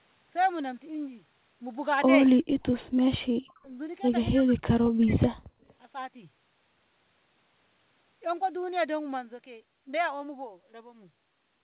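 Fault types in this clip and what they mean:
Echo leak: two brief, faint scraps of the speech come back about 239 ms late, likely loudspeaker pickup that the echo canceller didn't fully remove.
Speech suppressed in double talk: the speech drops out, by around 40 dB, in three chunks between 3.4 and 5.38 s, likely the canceller clamping down during overlapping talk.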